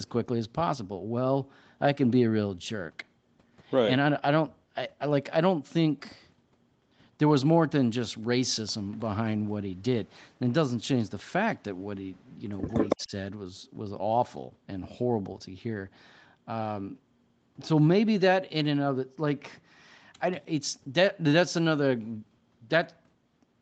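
Echo leak, from 12.68 to 13.04 s: a second copy of the speech trails the original by about 160 ms, at roughly the same loudness as the direct sound, so it sounds like a close, hard doubling rather than a faint reflection. The likely cause is a far end playing the call on a loudspeaker, where the echo canceller failed to strip out what its microphone picked up, so that copy was sent back into the call.

Speech suppressed in double talk, from 12.95 to 13.12 s, overlapping the end of the echo: the speech briefly dips, falling by around 25 dB at its deepest, over roughly 150 ms in total, so a fragment is nearly lost. With both sides sounding at once, the echo canceller likely could not tell its own talker from the returning loudspeaker signal and attenuated everything together, which produces this short, sharp hole in the audio.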